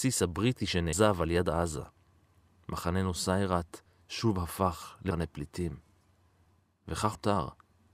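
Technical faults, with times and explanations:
0.93 s, 5.11 s and 7.15 s: dropped buffer (overrun). At each point the speech jumps forward with no gap, as about a fifth of a second is missing. The likely cause is input buffers overwritten before being read, so the two sides join directly.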